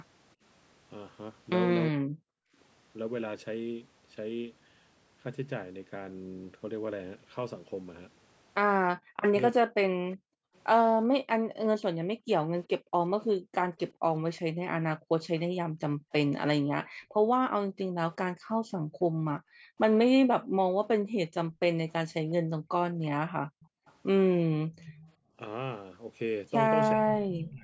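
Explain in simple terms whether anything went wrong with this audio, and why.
Several things went wrong, all tied to the call's echo handling.

Speech suppressed in double talk: at 1.91–2.28 s, 9.11–10.09 s and from 24.84 s to the end, the voice sharply dips or breaks up. This is likely because both sides spoke at once and the echo canceller turned down the talker along with the echo.

Echo leak: from 10.13–13.93 s, briefly at 18.12–18.16 s, and again at 21.91–25.13 s, a faint delayed copy of the voice trails about 0.36 to 0.38 seconds behind. This is likely loudspeaker sound that the far side's echo canceller failed to remove and sent back.

Background gated by the echo canceller: between 10.37 and 25.36 s, the room sound drops away and returns, for roughly five seconds in total. The canceller clamped the microphone down hard while the loudspeaker was playing, then released it.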